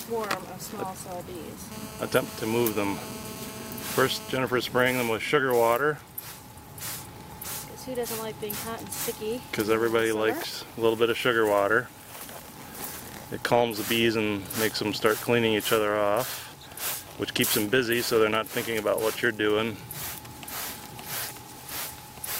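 From 1.72 s to 4.38 s there is GSM phone buzz: a hard, raspy 217 Hz tone with dense harmonics, about 14 dB below the signal. A nearby phone on a call transmits in steady bursts, which the audio circuitry rectifies into audible sound.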